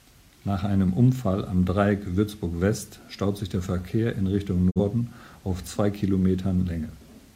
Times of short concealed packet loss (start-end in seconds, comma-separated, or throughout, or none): none